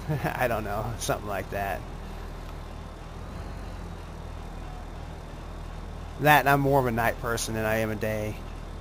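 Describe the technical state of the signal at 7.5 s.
At 7.5 s the signal is intact, with no dropout, click, distortion or other fault to be heard.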